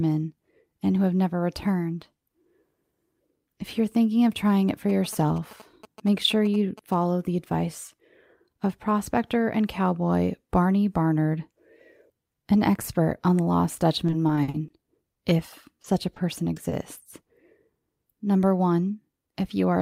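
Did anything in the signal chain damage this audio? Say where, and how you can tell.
Yes. In the analogue wiring, from 4.89 to 6.94 s, between "of trying it for" and "the advice", there is a galloping dit-dit-dit of short 217 Hz buzzes about 20 dB below the speech. These are GSM signalling bursts. A nearby 2G phone's radio pulses were rectified by the audio circuit.

The network caused repeated packet loss, which gives a robotic sound. From 14.07 to 14.72 s, just after "expert on the lost", the speech turns choppy. Holes up to 50 ms long were patched by continuing the last sound. About 120 ms is missing.

There are two short stalls from a late packet, at 15.14 s and 16.70 s. Each holds the sound about 20 ms too long. Packets arrived 20 ms later than expected. The jitter buffer ran dry and stretched audio until they landed. Nothing is lost.

Short concealed packet loss occurs at 15.82 to 15.86 s and 16.14 to 16.18 s. 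Each is a brief smear where 20 ms never reached the decoder in time. The receiver filled each hole by extending the preceding sound, then blended back into the real audio.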